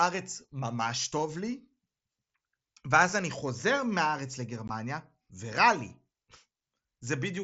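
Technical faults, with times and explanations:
4.68 s, unconcealed Bluetooth headset packet loss: a 15 ms hole in the wideband mSBC speech with abrupt edges, which fits two dropped packets. Nothing fills the gap, unlike concealed loss.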